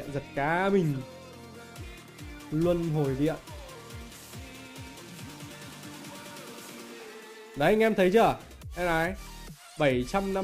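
From 1.88 to 9.53 s, sample clock jitter of around 7 microseconds mistimes samples. A hiss about 25 dB below the signal follows loud, bright sound.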